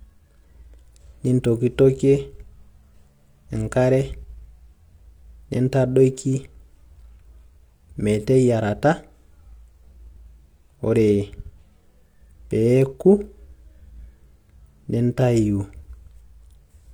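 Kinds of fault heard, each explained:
No kinds of fault are heard in this speech, so there are none to explain.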